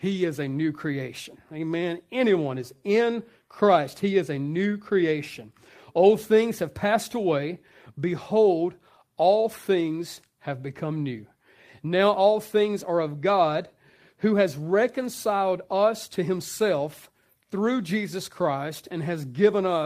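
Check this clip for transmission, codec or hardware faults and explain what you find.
No transmission, codec or hardware faults turn up in this clip.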